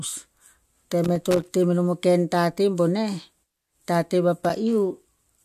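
At 1.04 to 1.49 s, and again briefly at 4.39 to 4.50 s, the speech breaks into loose connector crackle. A worn contact repeatedly opens and closes, chopping the signal into irregular scratchy bursts, unlike the clean silent gaps of digital dropouts.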